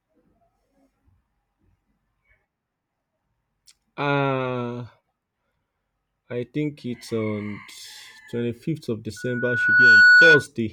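From 9.16 to 10.47 s, loudspeaker feedback squeal: the microphone-to-speaker loop runs away at 1.5 kHz, swelling within a second far above the speech, unlike a constant tone.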